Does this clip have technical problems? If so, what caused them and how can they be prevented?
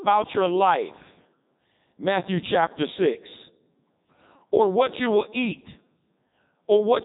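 Yes: the Codec 2 vocoder, throughout. The speech is rebuilt from sine waves, so it sounds robotic and buzzy with nothing above 3.8 kHz. Unlike simple band-limiting, the waveform itself is lost. Use a waveform codec instead.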